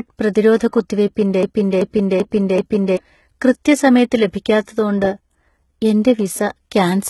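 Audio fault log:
Throughout: HE-AAC compression, and the damage is heavy. Nothing comes through above 11.8 kHz, and the treble that is there sounds rebuilt from lower bands rather than captured, so sibilants come out gritty and metallic. That is likely from HE-AAC at a low bitrate, around 16 kbps.
1.43 to 2.97 s: broken-record loop. A 385 ms fragment plays four times back to back, then the audio picks up again at "കൃത്യസമയത്ത് ലഭിക്കാത്തതോണ്ട്". This is likely a player or stream stall that kept resending its last buffer, so whatever belonged in that stretch is gone.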